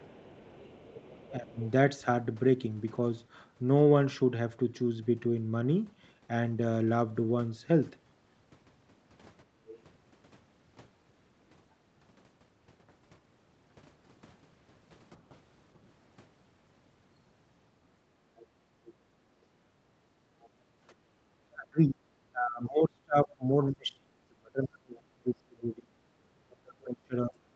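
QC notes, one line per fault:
0.0–1.7 s, 9.67–9.82 s, 18.37–20.49 s, 24.96 s to the end: other side's voice leaking through. A faint second voice sits some 20 to 30 dB under the speech, likely loudspeaker playback the echo canceller failed to subtract from the microphone.
1.31–1.59 s and 21.41 s to the end: speech suppressed in double talk. The talker's level drops by around 20 dB in the first spot and by as much as 35 dB in the long final stretch, likely because the echo canceller treated overlapping talk as echo.
9.45–9.57 s and 18.03–21.13 s: background gated by the echo canceller. The canceller clamped the microphone while the loudspeaker played, so the room sound dips by about 11 dB and about 14 dB, roughly 0.1 s and 0.7 s in total, then returns.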